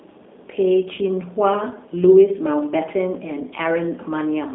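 From start to finish the speech carries G.729 codec damage, plainly audible: the voice is rebuilt from a vocal tract filter, pitch predictor and sparse pulses at 8 kbit/s, sounding rough and synthetic. A spectrogram shows energy confined to about 200 Hz to 3.6 kHz, with nothing above 3.7 kHz.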